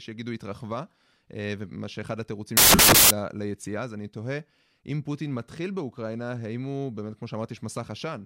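From 2.57 to 3.11 s, for about half a second, the speech gives way to a burst of loud, harsh broadband noise. This is a case of samples built from the wrong bytes: each sample was assembled with its bytes misaligned or in the wrong order, so the rapidly changing low-order bits landed in the most significant position and turned ordinary speech into near-random large values.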